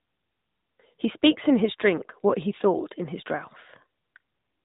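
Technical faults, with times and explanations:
Throughout, AMR narrowband mobile codec: the speech has nothing above 3.8 kHz, because this codec samples at 8 kHz and rebuilds the voice from a vocal-tract filter driven by sparse pulses. The plainly audible buzzy, synthetic edge fits a 10.2 kbps mode.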